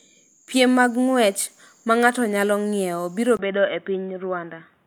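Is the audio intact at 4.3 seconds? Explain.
No. From 3.37 s to the end, speech turns boxy and quieter, with nothing above 3.8 kHz and a 20 ms gap at the change, likely an input switched to a poorer device.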